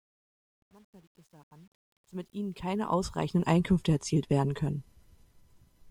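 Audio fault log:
0.00–3.55 s, truncation distortion on a fade: the speech fades in from silence, but its quiet start sounds gritty, worst from 0.00 to 2.41 s. An undithered gain stage, consistent with 10-bit resolution, rounds the low-level waveform into coarse square steps.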